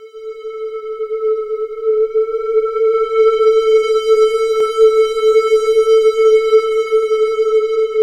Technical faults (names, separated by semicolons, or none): doubled audio track